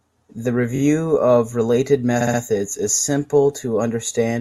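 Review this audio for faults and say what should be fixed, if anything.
Repeated frames stutter the speech at 0.75–0.79 s, where a 21.3 ms block plays twice more, and at 2.20–2.39 s, where a 64 ms block plays three more times, adding 192 ms. The waveform and spectrogram show identical copies side by side. Prevent this by de-duplicating frames by sequence number before decoding.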